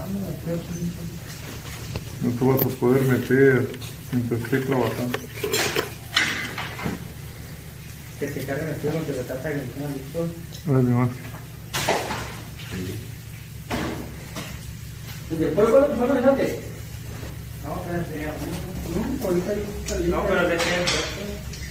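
At 0.52 s a call bitrate drop begins. It lasts until 3.01 s. The sound turns coarse and dull. This points to the encoder falling from 32 to 16 kbps after the bandwidth estimate sank. The worst stretch lasts 1.67 s.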